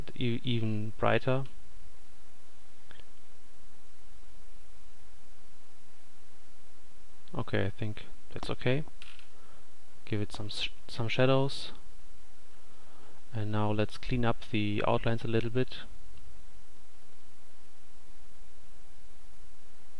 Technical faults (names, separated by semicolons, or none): none